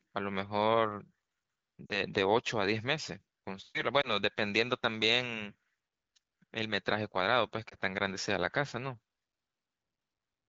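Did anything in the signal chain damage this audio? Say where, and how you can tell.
Yes. The damage happened on the radio link, as lost AMR speech frames. At 1.86 to 2.01 s, two frames go missing, about 40 ms of audio. The sound stretches briefly, then sinks. Single frames drop at 4.01 s and 7.70 s, each a short dip or warble. Corrupted frames failed their checks, so the decoder repeated the last pitch and vocal tract settings at falling gain. The AMR-WB wideband decoding makes that fade quick.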